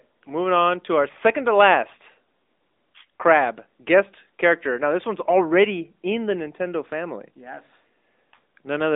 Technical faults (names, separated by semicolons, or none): AMR narrowband mobile codec